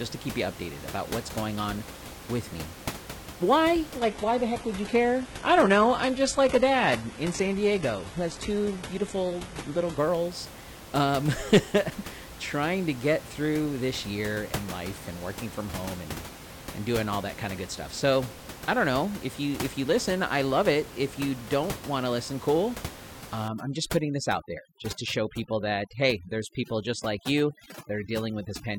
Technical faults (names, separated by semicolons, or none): adaptive stream at a lower bitrate; overdone noise removal